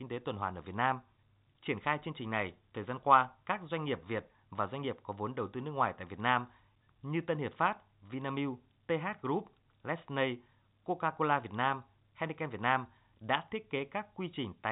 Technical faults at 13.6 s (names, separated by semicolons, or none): none